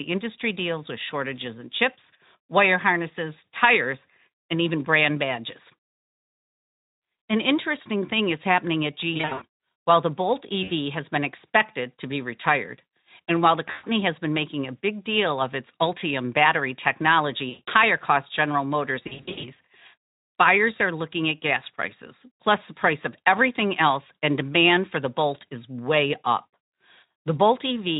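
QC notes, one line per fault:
9.13–9.44 s, 10.63–10.71 s, 13.71–13.85 s, 17.49–17.70 s and 19.04–19.51 s, VoIP packet loss concealed by the speech codec: packets drop out in bursts, which fits 20 ms Speex frames, and the decoder fills each gap by extending the last pitch and spectral shape at falling gain. The longest stretches are 200 ms of loss scattered over 280 ms and 300 ms over 400 ms, with runs up to 80 ms. Each gap turns to a stretched, buzzy tone or coloured noise that fades, and the sound stays weak briefly afterward.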